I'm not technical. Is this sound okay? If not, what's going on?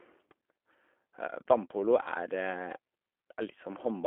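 No. Three kinds of problem can be heard in this speech.

G.729 codec, throughout the clip: This is a phone-call compression method that doesn't send the actual sound. It sends a rough description of how the voice is being shaped and how its pitch moves, and the receiving end rebuilds speech from that. Here the damage is plainly audible. Everything sits in a narrow band from 250 Hz up to 3.4 kHz, so the voice sounds thin and boxy, and it has a slightly rough, synthetic edge.

VoIP packet loss concealed by the speech codec, at 0.31 s and from 2.03 to 2.12 s: Small pieces of the call went missing in transit, one 10 ms piece at 0.31 s and three pieces totalling 30 ms in the later stretch. Instead of leaving silence, the receiver guessed, carrying the last bit of voice forward and letting it fade. The result is a brief buzzy or smeared moment, longer at 2.03 s. Because each rebuilt piece depends on the one before, the voice takes a little while to sound right again.

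Dropped samples, at 3.43 s: A single sharp click is heard here. The sound suddenly jumps ahead, as if a couple of tiny slices of audio, lasting only a fraction of a millisecond, were skipped. The gap is far too short to lose any of the speech itself. This is likely caused by the audio stream briefly losing a few samples somewhere in the recording or playback chain.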